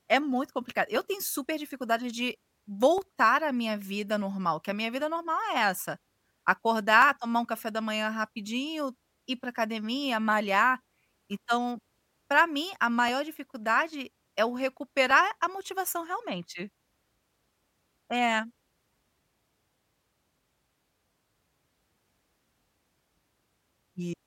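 From 0.96 s to 23.19 s a regular click sits on the speech about every 2.02 s, roughly ten times in all. These are clock drift buffer slips. Two devices were likely running on separate clocks that differ by around 200 ppm, so the buffer between them drifted until a short block of samples, something like fifteen, was dropped or repeated, leaving a tiny discontinuity at each slip.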